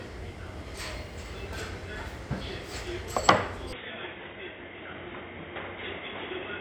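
From 3.73 s the sounds go dull; the spectrogram empties above 3.8 kHz and faint new background noise appears, likely input switched to a poorer device.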